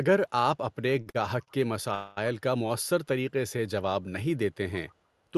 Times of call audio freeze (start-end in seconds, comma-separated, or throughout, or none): 1.94-2.18